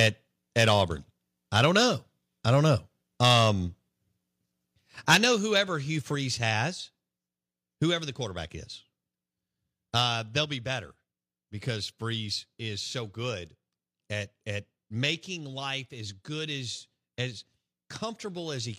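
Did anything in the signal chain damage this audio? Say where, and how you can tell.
Yes. Microphone overload at the converter input: flattened, crackling peaks at 0–0.07, 0.58–0.82, 1.56–1.82, 3.23–3.45, 5.09–5.26 and 5.56–5.59 s. The signal runs up to about 9 dB past full scale, likely from excessive input gain.

Microphone volume stepped down in call processing: voice and background drop abruptly by about 4, 3, 2 and 3 dB at 5.15, 6.15, 7.17 and 10.44 s, likely automatic gain control reacting to the clipping.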